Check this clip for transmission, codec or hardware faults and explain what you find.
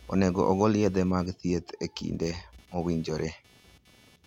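One hardware fault runs through the whole speech clip: computer activity noise. Throughout, a buzzy, chirping layer sits about 35 dB below the speech, pulsing at around 300 Hz. Processor and graphics load shifts disturb the audio's shared ground. On a spectrogram it shows as a faint comb of harmonics that does not follow the speech.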